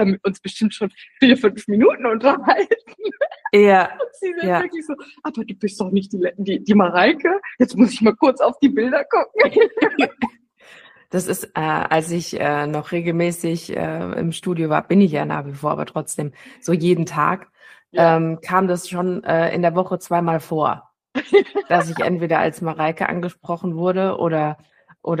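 Three sharp single clicks sound at 11.94, 13.30 and 22.70 s, most likely dropped samples: a few samples missing, so the waveform jumps abruptly.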